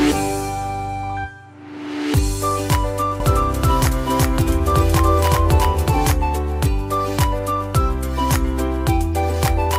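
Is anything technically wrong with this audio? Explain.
Yes. From 3.20 to 6.12 s there is a doubled audio track: a second, equally loud copy follows about 400 ms behind, likely from a slower capture path. Unlike an echo, this one copy never decays, carries no room colour, and starts and stops abruptly.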